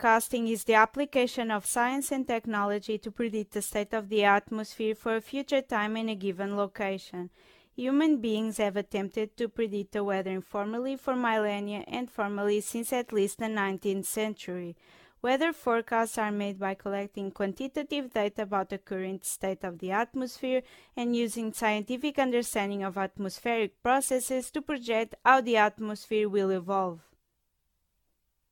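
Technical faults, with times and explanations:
Throughout, generation loss: the speech has a swirly, smeared, hollow quality that's heavier than a single lossy encode would give, with consonant attacks blurred and nothing above 17 kHz. The likely cause is the audio going through AAC-LC around ten times, each at something that sounds like 96 kbit/s. Every re-encode quantises again on a shifted frame grid, so the noise and spectral holes from each pass pile up.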